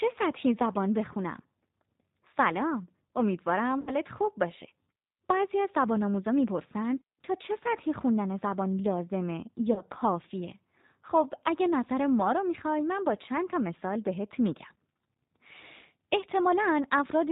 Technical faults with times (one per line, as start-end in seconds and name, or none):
0.00-17.31 G.729 codec
3.81-3.92 VoIP packet loss concealed by the speech codec
9.73-9.83 VoIP packet loss concealed by the speech codec